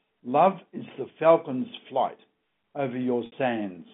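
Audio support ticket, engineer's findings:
Packet loss with pitch repetition, 3.26–3.32 s: about 60 ms gap, consistent with three 20 ms packets, bridged by repeating the last pitch period. Brief buzzy hold fading out, then cross-fade back. G.711 telephone band intact.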